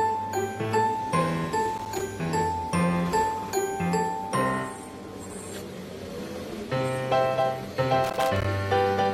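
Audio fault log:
1.77–2.01 s and 8.04–8.45 s, loose connector crackle: a worn contact intermittently breaks, chopping the signal into irregular scratchy bursts, seen as ragged waveform dropouts and broadband vertical streaks.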